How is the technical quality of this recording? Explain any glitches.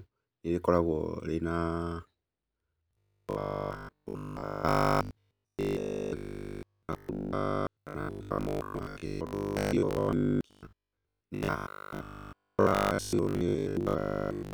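The recording is marred by robotic sound from repeated short buffers from 2.91 s to 14.53 s. The speech becomes a rigid, metallic buzz at 50 Hz that loosely tracks the words. The likely cause is audio arriving too seldom, so about 20 ms chunks are replayed to fill most of the gaps while real audio is skipped.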